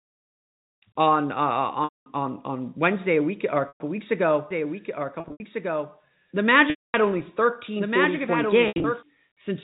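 Held, buzzy repeats of the last pitch cycle bridge gaps at 1.84 s (220 ms), 3.68 s (120 ms), 5.2 s (140 ms scattered over 200 ms), 6.7 s (240 ms) and 8.68 s (120 ms scattered over 160 ms), fading into silence in the longer ones before the speech cross-fades back. This is packet loss with pitch repetition: the receiver bridged missing audio by repeating the last period, within the telephone-band G.711 coding.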